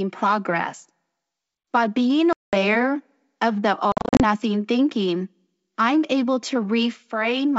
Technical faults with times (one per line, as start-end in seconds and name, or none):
2.33-2.54 packet loss on an ADPCM call
3.92-4.22 packet loss on an ADPCM call